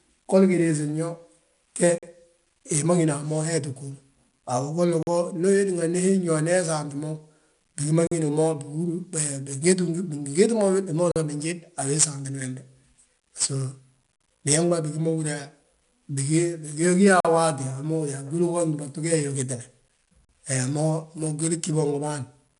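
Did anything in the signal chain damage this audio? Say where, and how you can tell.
Yes. The codec stage used 4-bit ADPCM. Each sample is coded as a coarse step from a prediction, so the error follows the signal level. The result is gritty hiss on every loud syllable and roughness on sharp onsets. Nothing is heard above 10.6 kHz, which points to a sample rate near 22 kHz.

The transport or playback buffer delivered the audio in 3-second chunks with dead air between them. Hard-edged 44 ms silences fall at 1.98, 5.03, 8.07, 11.12, 14.16 (just before "biñaŋ ma bigi ma") and 17.20 s. Each join is a clean hole with nothing lost, as a late-starting player would leave.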